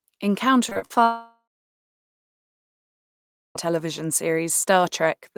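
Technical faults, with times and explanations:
0.69–0.98 s, repeated packet loss (robotic sound): the speech turns choppy, with four short holes, the longest 48 ms. Each gap is filled by stretching the previous sound, so nearly half of this span, about 100 ms, is synthetic patching rather than real audio.
1.03–3.57 s, long network dropout: the sound smears into a fading buzz, then about 2.1 s of silence follows before speech resumes with roughly 2.5 s gone. This is likely a prolonged loss of incoming audio, with the receiver briefly extending the last sound before giving up.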